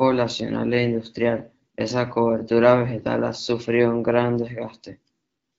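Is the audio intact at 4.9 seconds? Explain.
Yes, the audio is intact at 4.9 seconds, with the speech carried cleanly through the AMR wideband (HD Voice) codec at 12.65 kbit/s and no fault at that moment.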